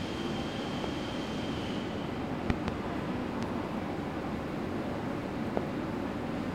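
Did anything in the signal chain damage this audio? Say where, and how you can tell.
Yes: loud pops at 0.84–0.86 s, 2.50–2.70 s (a double pop), 3.43–3.45 s and 5.57–5.59 s, peaking about 15 to 25 dB above the audio. The sound carries on beneath each one, unlike a dropout. Each points to a voltage step likely from a plug, switch or static in the analogue wiring.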